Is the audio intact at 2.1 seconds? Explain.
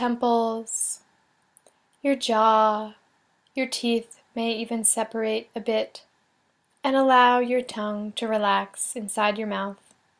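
Yes, the audio is intact at 2.1 seconds, with no dropout, click, distortion or other fault audible at that point.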